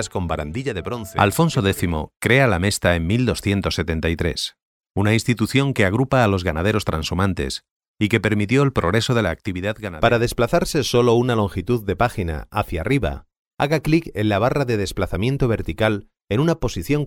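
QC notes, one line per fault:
No faults found.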